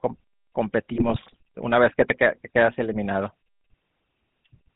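From the start to the end, the speech carries the GSM full-rate codec, at a bitrate consistent with 13 kbps. The codec rebuilds the voice from a vocal-tract filter driven by a sparse, regularly spaced pulse train. The result is plainly audible: a buzzy, gravelly roughness and no content above 4 kHz, so the audio is narrowband and dull at the top.

Between 0.94 and 1.36 s, GSM bit errors break through. Corrupted bits reach the decoder, and the filter, pitch and gain values it receives for those frames are wrong. The spectral shape jumps and the level lurches from frame to frame, so for roughly 0.4 s the speech dissolves into squawks, pops and gargling. The damage is dense enough to point to an error rate of around 2 percent.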